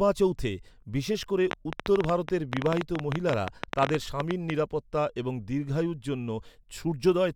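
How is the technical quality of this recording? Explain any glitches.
The recording has one obvious glitch. From 1.51 to 4.51 s there's a train of clicks: around forty uneven ticks, 11.4 per second, poking well above the speech, likely from interference or a faulty connection.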